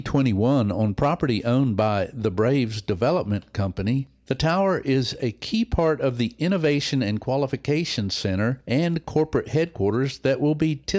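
No technical faults are audible.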